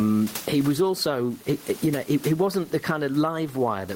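Gain pumping runs through the whole clip. The gain swings roughly 15 dB. This is likely excessive gain meeting a fast limiter.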